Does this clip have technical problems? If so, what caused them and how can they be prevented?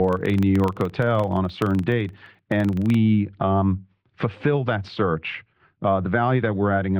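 Yes. From 0 to 3.01 s, just before "um fulfill that search", the filter restarted on every block. Each block began from silence, giving a 23.4 Hz buzz that fits 2048-sample blocks. Carry the filter's state across block boundaries instead of resetting it.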